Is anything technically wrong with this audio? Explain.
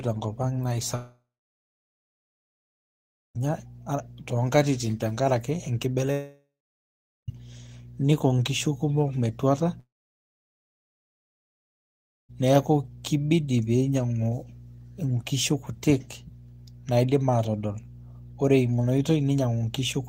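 Yes. Mains hum runs through the whole speech clip: a steady 60 Hz tone, roughly 20 dB below the speech, from power-line coupling such as a ground loop.

Long network dropouts occur at 0.95–3.41 s after "tenkopang naa", 6.12–7.30 s after "toonkatitin tenkaraki", and 9.80–12.31 s before "neku kibidi pinyiangu". Each is likely caused by audio that never reached the receiver. A brief fading fill gives way to near-silence, and speech resumes with the missing part gone.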